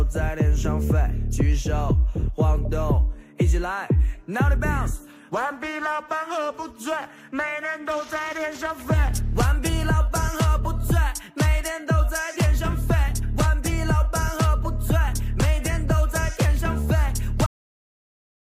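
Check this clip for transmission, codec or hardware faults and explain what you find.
One fault is present. Cut-off end at 17.46 s: the final buffers were never written, so the sound stops mid-event and drops straight to digital silence for the last second, with no decay.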